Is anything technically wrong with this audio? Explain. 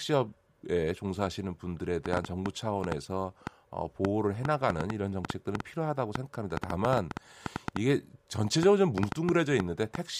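Yes. From 2.06 s to 9.96 s a train of clicks runs over the speech, about 4.6 per second at an uneven pace, some forty similar pops standing well above the speech and audible in the pauses too. Electrical interference or a faulty connection or power supply is the likely cause.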